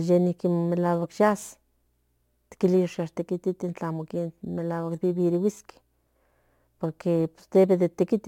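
From start to finish the speech carries crude rate conversion: samples were repeated by nearest-neighbour picking rather than filtered, in a pattern that points to a 44.1 kHz to 48 kHz change. The resulting error sits roughly 35 dB below the speech as a gritty, inharmonic fizz riding on louder and brighter syllables. A spectrogram would show faint, unrelated tonal lines and smeared energy mirrored across the high band, and the waveform would show tiny stair-step irregularities.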